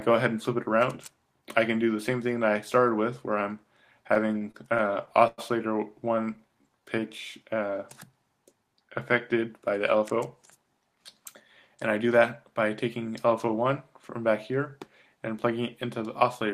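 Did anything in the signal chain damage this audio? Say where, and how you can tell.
Yes. The damage is at the network and jitter buffer stage of a packet receiver. From 4.07 to 5.40 s there are repeated stalls (stutter): nine short breaks where the sound holds on its last moment instead of advancing, about 215 ms of fill in total, which is 16% of that span, the longest 104 ms. Packets were arriving late, the buffer kept running dry, and the receiver stretched the previous audio until data resumed. Nothing is lost, but the passage drags and hiccups.

From 6.08 to 7.01 s there is a jitter buffer slow-down. The audio plays at 90% of normal speed with no change in pitch, and 106 ms is added across under a second, so sounds come out drawn out. The receiver was building up its reserve, either because it was low or because it had just raised its target delay. It did this by repeating individual pitch periods or slivers of pauses many times in succession.

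The opposite correction, a jitter buffer speed-up, happens three times: 9.46 to 10.16 s at 107% speed, 10.57 to 11.21 s at 107%, and 12.03 to 12.63 s at 105%. Each removes a few tens of milliseconds, roughly 50, 50 and 40 ms, and pitch stays constant. These passages sound hurried. The buffer held more than its target, and the receiver trimmed short pitch-period segments to bring the delay back down.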